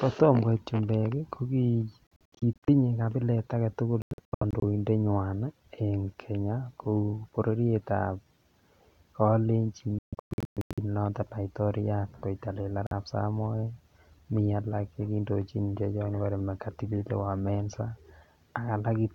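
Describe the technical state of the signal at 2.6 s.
At 2.6 s you're inside a stretch of Bluetooth dropouts running from 2.08 to 2.69 s. The speech keeps cutting to silence in short, hard-edged gaps, adding up to about 300 ms and the longest about 70 ms, likely from late packets being discarded.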